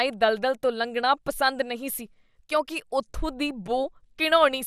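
Throughout the speech there is a dull, gurgling graininess, likely from MP2 compression. The sound's sub-bands were starved of bits. Upper bands flicker on and off, with nothing above 15.1 kHz. What remains is coarsely quantised, which fits a rate around 80 kbps.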